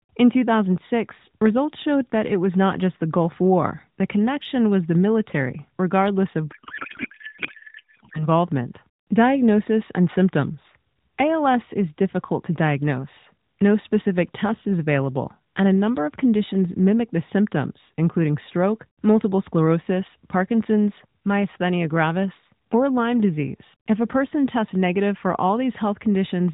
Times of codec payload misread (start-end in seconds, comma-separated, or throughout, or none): 6.52-8.28